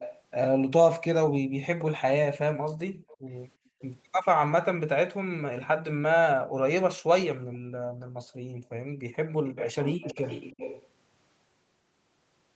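From 0.00 to 0.22 s, a faint delayed copy of the speech trails the voice. This is an echo leak. It arrives 333 ms late, about 15 dB below the speech. The likely cause is a far-end loudspeaker whose echo canceller let some of the microphone pickup through. It returns from 3.08 to 3.38 s, weaker, about 25 dB down. From 9.27 to 10.87 s it is strongest, about 10 dB down.

Between those events, the room background is gated by the echo canceller. The canceller turned the microphone down hard while the loudspeaker played. From 3.57 to 3.79 s the background drops by about 30 dB and then comes back. From 6.42 to 6.55 s it dips by about 40 dB. From 7.37 to 9.00 s it falls away for about 1.5 s, again by about 40 dB.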